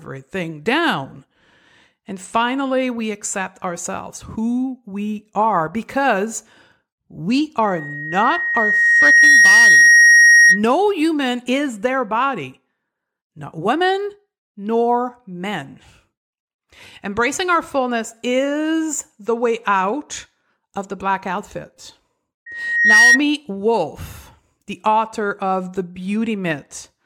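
A microphone was picking up the loudspeaker it fed, and at 1.9 kHz the loop gain rose above one, producing loudspeaker feedback squeal. From 7.65 to 10.63 s the tone swells over roughly a second and a half to about 10 dB above the speech, then stops just before "human is their body". It returns right after "of the black outfit", from 22.46 to 23.20 s, climbing faster, in about half a second, to a similar level.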